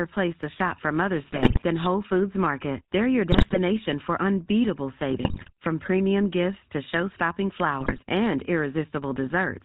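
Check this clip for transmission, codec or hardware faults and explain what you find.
Two faults are audible: GSM full-rate coding across the whole clip and four bursts of GSM bit errors.

GSM full-rate codec, throughout: the speech has been squeezed through a codec that models the vocal tract and excites it with a sparse, regularly spaced pulse train, with everything above 4 kHz discarded. The result is plainly audible: a dull, band-limited sound with a buzzy, gravelly roughness layered on every voiced stretch. This fits a 13 kbps GSM full-rate stream.

GSM bit errors, at 1.32 to 1.61 s, 3.32 to 3.57 s (just before "for unbeatable"), 5.10 to 5.51 s (between "for unbeatable" and "from premium gifts to") and 7.80 to 7.99 s: corrupted bits reached the decoder and scrambled its filter, pitch and gain parameters frame by frame. The spectrum warps and the level jumps, so each burst breaks into squawks, pops and gargling. 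The damage suggests an error rate of a few percent on a weak radio link.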